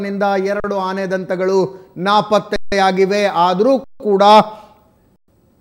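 At 0.6 s (40 ms), 2.56 s (160 ms), 3.84 s (160 ms) and 5.16 s (120 ms), an underrun with held sample freezes the output: the waveform flattens at a non-zero level, a blank spectrogram gap, then resumes where it stopped, so the sound pauses and continues with only soft edges.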